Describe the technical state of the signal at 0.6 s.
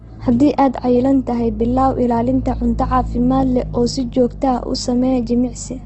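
At 0.6 s the speech carries the same damage as the rest of the clip, likely Opus compression in its CELT music mode. Nothing reaches past 8.2 kHz, and bands refilled with folded or noise content make the sound rough and grainy, which fits roughly 16 kbps.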